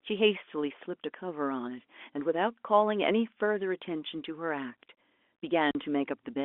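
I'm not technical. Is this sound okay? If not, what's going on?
No. Around 5.71 to 5.75 seconds, some of the data carrying the call went missing, and the receiving end played silence instead. This is called packet loss filled with silence. The speech drops out for 40 milliseconds, leaving an abrupt hole.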